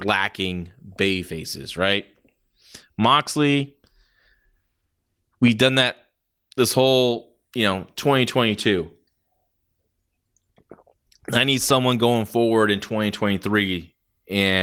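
No faults are audible anywhere in the speech recording.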